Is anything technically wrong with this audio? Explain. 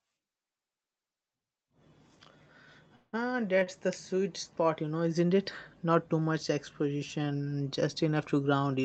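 Yes. The speech has a freeze followed by two short stalls.

From 2.95 s to 3.28 s there is what is likely a call audio freeze. Packets were held up in transit and the receiver's jitter buffer ran dry. Rather than drop out, the receiver extended the last sound for about 174 ms as a fading buzz or hiss that ends in a brief silence of roughly 20 ms. When the packets arrived, playback resumed from the same point. Nothing is lost, but the speech is pushed 174 ms later.

Two short stalls from a late packet follow back to back: 3.59 s to 3.63 s, lasting 21 ms, and 3.63 s to 3.69 s, lasting 33 ms. Each time a packet missed its playout slot, the buffer emptied and the receiver held the current sound until the data came in, then carried on without skipping anything. The result is a slightly prolonged sound with a faint buzzy dip, adding another 54 ms of delay in total. The call codec's band limit cuts off content above about 8 kHz throughout.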